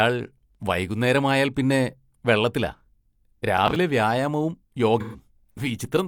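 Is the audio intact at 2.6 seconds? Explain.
Yes, nothing at 2.6 seconds interrupts or degrades the speech, and it continues cleanly through that moment.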